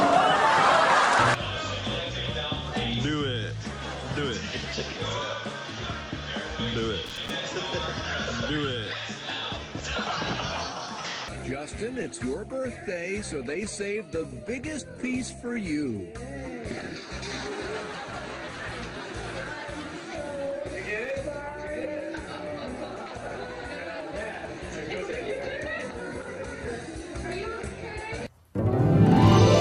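A worn or dirty contact briefly made and broke connection, causing loose connector crackle: an irregular scratchy burst from 7.06 to 7.30 s and again from 20.88 to 21.14 s.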